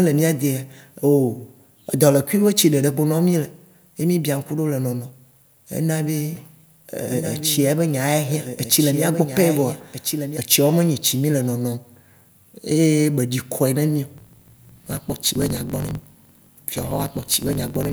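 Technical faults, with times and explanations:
6.35–10.37 s, doubled audio track: the speech gains a dry, full-band copy trailing about one and a half seconds behind, roughly 10 dB quieter, switching on and off abruptly before "etsiawo me". A second, slower capture path is the likely cause.
14.16–17.92 s, block size mismatch (truncated): a steady 46.9 Hz buzz appears and speech runs 1.12 times fast at near-normal pitch. One stage writes longer blocks than the next reads, which fits a 1024-sample read, so each block's tail is discarded.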